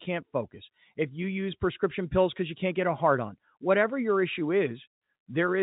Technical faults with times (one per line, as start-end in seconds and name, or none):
none